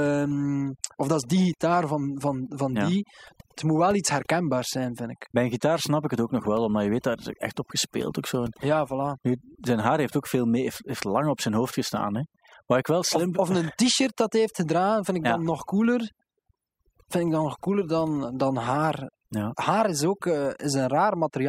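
A speech recording with overdone noise removal throughout: aggressive noise reduction strips bands near its noise estimate, leaving near-silent gaps with twinkling specks. A spectrogram shows scattered isolated dots in the background and patchy, hollowed-out harmonics.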